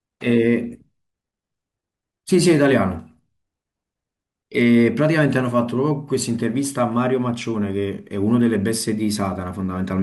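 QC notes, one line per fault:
No faults found in the speech recording. No QC lines to log for any part of the audio.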